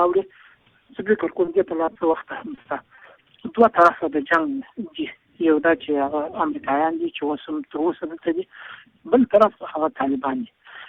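At 1.45, 1.85, 1.93 and 2.11 s there is short concealed packet loss. Each time about 20 ms of audio failed to arrive, and the receiver extended the preceding sound before blending back. Each is heard as an isolated smear or wobble.

From 2.55 to 3.03 s, repeated packet loss (robotic sound) sets in. Four holes, the longest 40 ms, fall close together and patch about a fifth of that half-second. Because the patches follow each other so closely, the sound turns choppy rather than producing separate smears.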